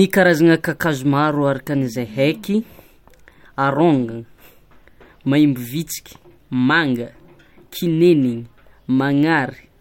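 No technical faults are audible anywhere in the recording.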